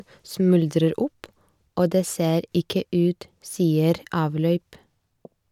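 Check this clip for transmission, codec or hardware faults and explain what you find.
Nothing wrong can be heard anywhere in this speech.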